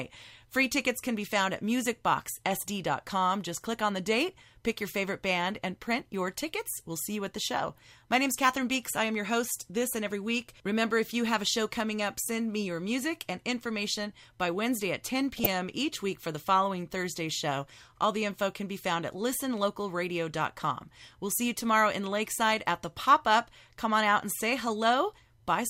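At 15.34 s, and lasting until about 15.46 s, the speech is briefly overlaid by short blips of noise, the sound of DAB burbling. Weak reception let bit errors, at a rate of around a third of a percent, slip past error correction into the MP2 stream. Corrupted samples then put short blips of noise into single sub-bands, across roughly eight damaged frames.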